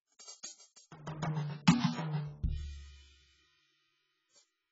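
Dull, smeared music with a hard ceiling on the treble: nothing sounds above about 7.7 kHz, and sustained tones carry a watery warble and a fizzy, swirling texture across the whole clip. The damage is heavy and points to AAC compression, likely AAC-LC at a very low rate, around 12 kbps. Starved of bits, the encoder drops the upper band entirely and coarsely quantises what remains, leaving spectral gaps that smear and warble.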